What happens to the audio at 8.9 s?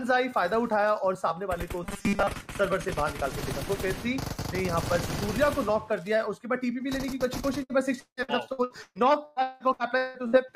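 At 8.9 s the audio is inside a stretch of repeated packet loss (robotic sound) running from 7.63 to 10.47 s. Eleven gaps, the longest about 181 ms, are patched by stretching the last sound, so roughly 41% of the span turns choppy. The holes keep recurring instead of producing one isolated dropout.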